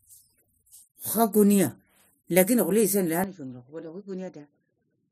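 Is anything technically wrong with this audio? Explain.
Yes. From 3.24 s to the end, the speech turns duller and drops about 10 dB, with nothing above 7.3 kHz and a new noise floor around 40 dB down, with no gap. This is likely an input switched to a poorer device. Unlike a simple filter, tone, level and background noise all change together.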